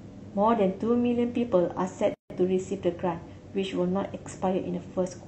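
At 2.14 to 2.30 s, a gap at a join of encoded pieces: about 160 ms of encoder padding silence, smeared edges, then speech resumes exactly where it stopped, unlike a dropout.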